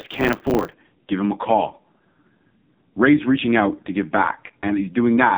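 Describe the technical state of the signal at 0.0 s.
A block size mismatch (truncated) runs from 0.0 to 0.74 s. Each block's tail is discarded, leaving a 100 Hz buzz and speech running about 1.09 times fast. The AMR narrowband mobile codec also applies here, cutting everything above 4 kHz and causing heavy damage: the speech sounds buzzy and synthetic, consistent with a rate near 5.15 kbps.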